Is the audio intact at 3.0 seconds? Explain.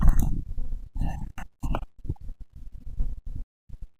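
No. From 0.94 s to the end, the converter's sample clock wanders by several microseconds, so each sample lands slightly early or late. On fast-changing parts of the speech this adds sample clock jitter, a roughness or hiss about 40 dB below the signal that swells on loud, bright sounds and disappears in pauses.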